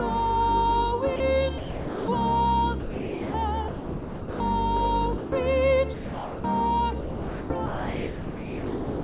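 The sound drops out to steady comfort noise at 1.16–1.2, 1.58–2.08, 2.8–3.34, 3.68–4.4, 5.18–5.32, 5.94–6.44 and 7.0–7.5 s, and from 7.66 s to the end. This is likely sound dropped by the voice detector, which treated real sound as background. The band stops at 4 kHz throughout.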